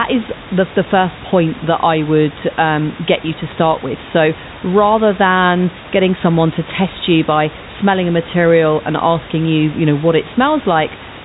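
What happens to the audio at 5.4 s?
Nothing goes wrong at 5.4 s: the speech carries on intact through that moment, with only the room noise beneath it and the narrow telephone band of the G.711 line.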